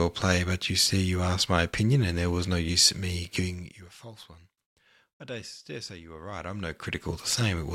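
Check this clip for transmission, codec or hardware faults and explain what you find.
One fault stands out: zipper noise. It runs from 3.41 to 3.93 s, right after "no use in me". The level drops by roughly 20 dB in 2 dB steps, about twenty per second, with no smoothing. Each step clicks, so the fade ticks audibly.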